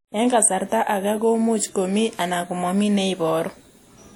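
From start to finish the speech carries plainly audible codec damage, likely from WMA compression at a rate that fits roughly 48 kbps. Each long transform block smears quantisation noise over tens of milliseconds, so the speech rings and sounds washy, with a hiss that swells and fades with the level. On a spectrogram, weak upper partials drop out as blank holes, and smeared haze spreads before and after each onset.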